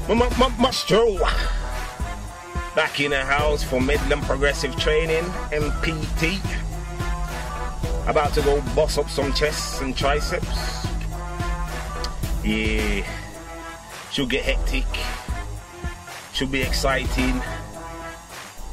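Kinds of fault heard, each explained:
Damaged data in a compressed stream: three brief glitches of 10 to 20 ms each, where corrupted bytes make the decoder misread frames and lose sync.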